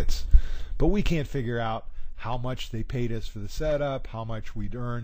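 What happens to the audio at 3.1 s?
Nothing goes wrong at 3.1 s: the audio plays through intact.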